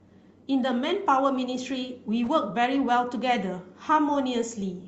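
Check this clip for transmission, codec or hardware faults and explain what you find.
No transmission, codec or hardware faults turn up here.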